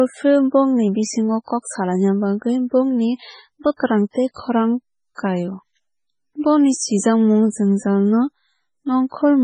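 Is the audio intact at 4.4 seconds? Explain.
No. Pre-echo runs from 4.34 to 4.36 s: noise spread across the codec block leaks about 27 ms ahead of the attack, a short hiss visible as a smear before the onset on the spectrogram. The whole clip is also watery and swirly with no content above 10 kHz, likely from heavy MP3 compression; the spectrogram shows a hard ceiling and flickering gaps.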